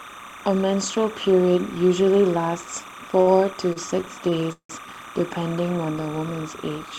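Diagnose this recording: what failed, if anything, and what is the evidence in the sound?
A steady chirping warble sits behind the speech for the whole clip, flipping between pitches near 1 kHz and 2 kHz, roughly 15 dB below the voice. This is timecode bleed in the analogue wiring: 30-frame linear timecode leaking from an adjacent track or cable.

At 3.21 to 3.29 s a sound is held unnaturally long, about 54 ms of it stretched, with nothing lost afterwards. This is a short stall from a late packet at the network stage. The jitter buffer ran dry, the receiver extended the last sound, then resumed where it left off.

Between 3.73 and 4.71 s the speech drags and stutters through four separate holds, totalling 229 ms, the longest 171 ms and faded. These repeated stalls conceal about 23% of that stretch. The network was delivering late again and again, so the jitter buffer kept emptying and the receiver padded each wait.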